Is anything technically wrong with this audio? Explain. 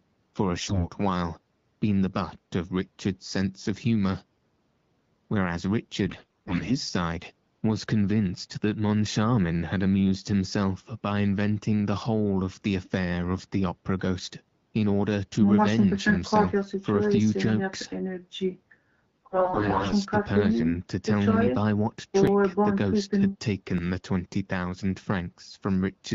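Yes. The speech is carried over the AMR wideband (HD Voice) codec, with only light coding roughness, but two kinds of fault break through.

AMR bit errors, from 0.55 to 0.90 s, 6.06 to 6.72 s and 19.16 to 19.93 s: the voice keeps roughly its pitch and loudness but turns hoarse, scratchy and gargly. Bits in the less protected part of each frame arrived corrupted, around one in ten, and nearer one in seven in the last burst, while the check on the essential bits still passed. The decoder therefore accepted the frames and rebuilt the voice from excitation pulses in the wrong positions and wrong gain and spectral values.

Dropped buffer (overrun), at 22.27 s and 23.78 s: each is a small forward jump in the speech with no gap of silence. A few milliseconds of audio are missing each time, roughly ten at the first and five at the second. The likely cause is that the software failed to collect its samples before the hardware overwrote them, so the audio on either side of the lost piece was spliced directly together.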